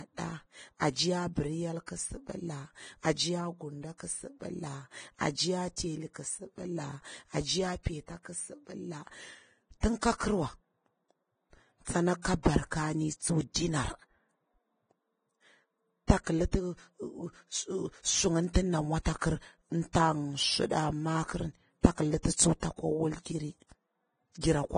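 Throughout, the speech sounds hissy and grainy with nothing above 9.7 kHz, likely heavy Vorbis compression near 22 kbps. A spectrogram shows a hard ceiling and speckled treble. At 24.41 to 24.43 s, pre-echo smears a 26 ms hiss ahead of an attack, because block-wide quantisation noise fills the quiet gap. The waveform shows a fuzzy lead-in before the onset.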